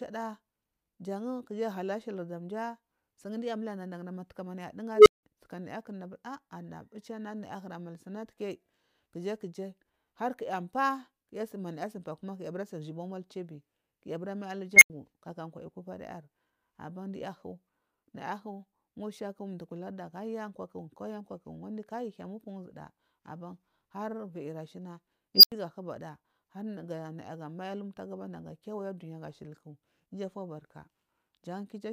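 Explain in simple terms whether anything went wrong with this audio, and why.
An unstable filter went wrong three times. A filter that feeds its output back into itself got bad settings, so its output kept growing until the numbers overflowed. You hear a tone swell into a loud squeal within about 50 to 110 ms and then drop into silence: a low tone near 400 Hz at 4.95–5.23 s; a tone near 2 kHz at 14.76–14.90 s, after "bura mal" and before "kaka kwal"; and a high tone near 5 kHz at 25.35–25.52 s, after "aban har viyiri shina" and before "hubada nayagamai abumtagu bandam". The silences last about 170, 85 and 85 ms.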